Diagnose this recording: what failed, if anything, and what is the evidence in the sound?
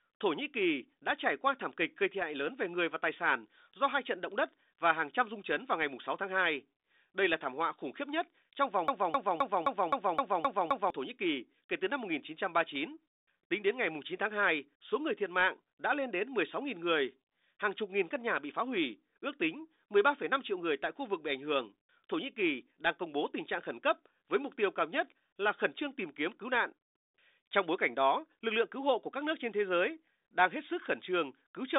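A broken-record loop runs from 8.88 to 10.90 s, after "khiếp nhất trong vòng". One 260 ms fragment repeats exactly, eight times back to back. The likely stage is a stalled player or stream buffer resending its last chunk. The speech due in that span is lost.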